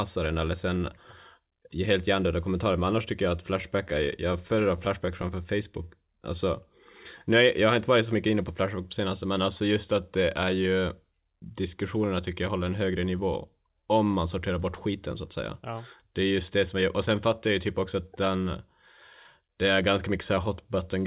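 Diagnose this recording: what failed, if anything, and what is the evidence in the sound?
Repeated stalls (stutter) in the network jitter buffer from 3.62 to 5.36 s after "annars tycker jag att": twelve short gaps, longest 14 ms, filled with continued sound. The waveform shows small repeated segments.

Jitter buffer speed-up from 19.81 to 20.37 s after "det är": about 40 ms of pitch periods cut, running 6% fast at unchanged pitch. The spectrogram shows compressed syllables.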